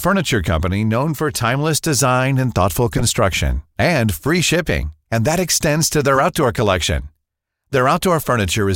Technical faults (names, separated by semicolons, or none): corrupt frame decoded